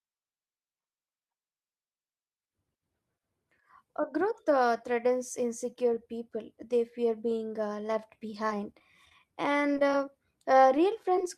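Right after "fear being uh left", from 8.49 to 9.12 s, there's repeated packet loss that gives a robotic sound. Seven holes come in quick succession, the longest 18 ms. Each one is covered by stretching the previous bit of audio for 74 ms in total, so the speech turns choppy and robotic.

Then come scattered short gaps, at 9.50 to 10.08 s and again at 10.77 to 11.38 s. Each stretch has a handful of isolated losses, around five and then four, all only about 10 to 15 ms at most. They're patched the same way and come across as brief ticks and little smeared hiccups.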